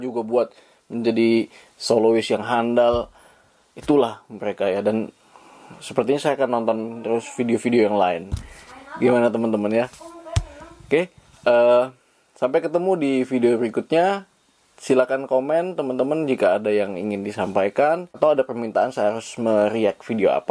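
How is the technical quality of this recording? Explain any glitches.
No glitches turn up anywhere in the recording. Nothing disrupts the audio at any point.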